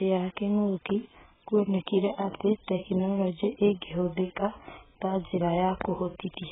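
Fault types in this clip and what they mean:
AAC compression: The speech has nothing above 3.8 kHz throughout. It sounds dull and smeared, with a warbling, fizzy texture. The damage is heavy. This is likely AAC-LC coding starved of bits, which fits a bitrate near 8 kbps.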